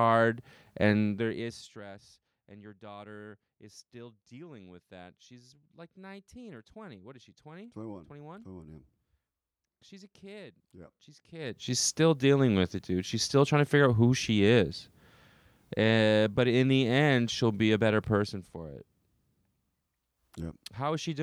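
The speech signal shows no technical faults at any point; its level is smoothly turned down or back up, as with a fader, and its continuity holds steady throughout.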